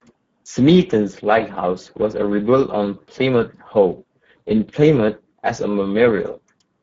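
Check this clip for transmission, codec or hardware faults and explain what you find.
There's one fault, and it runs the whole clip: Speex codec damage. Too few bits for the excitation leave the speech hoarse and noisy, which fits a low setting near 10 kbps, with nothing above 7.7 kHz.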